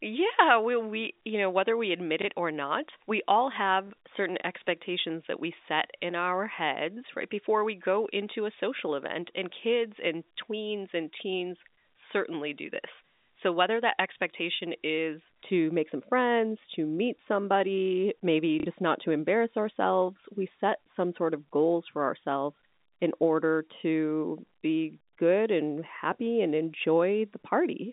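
From the start to 15.24 s, just before "to make some friends", the speech sounds thin, hard and sibilant, with the treble pushed well forward. This is pre-emphasis left on. A treble lift matching the J.17 curve, about 11 dB higher at 10 kHz than at 1 kHz, was applied but never undone by the complementary de-emphasis. The narrow telephone band heard throughout, from 200 Hz to 3.7 kHz through G.711 coding, carries that tilt into the upper speech range.

At 2.22 to 2.25 s and again at 3.87 to 3.90 s, there is a small blip. Each is 30 ms long, which fits one lost 30 ms packet. At 18.60 to 18.66 s, between "to meet somebody maybe" and "not to embarrass ourselves", a longer 60 ms stutter buzzes at about 33 Hz, consistent with two packets lost in a row. All three are packet loss with the last packet repeated. The receiver replayed the previous packet to fill each gap.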